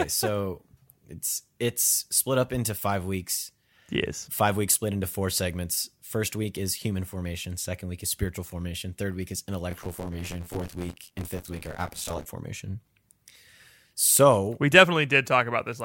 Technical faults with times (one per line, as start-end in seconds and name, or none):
9.71-12.26 buffer tearing